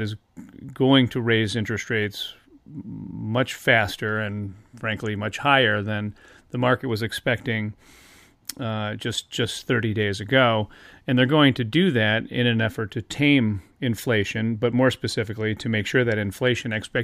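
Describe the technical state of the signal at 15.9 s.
No fault is audible at 15.9 s; the audio is intact at that moment.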